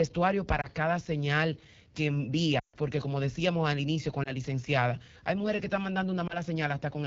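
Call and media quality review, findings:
AMR wideband (HD Voice) codec, throughout: rough, raspy speech with a noisy top band. Low-rate AMR-WB; the sound points to the 8.85 kbit/s mode, where the pulse-excited vocal tract model runs short of bits and the 6.4 to 7 kHz band is shaped noise.

Lost AMR speech frames, at 0.62–0.69 s, 4.23–4.34 s and 6.27–6.37 s: brief dips or warbles, each fitting a single lost 20 ms frame. At 2.59–2.76 s: a longer gap dropping to near silence within two frames, which fits a run of about seven frames (140 ms). Radio-side checksum failures; the decoder reused the last good pitch and vocal tract settings with decaying gain, so the sound resumes weak or rough.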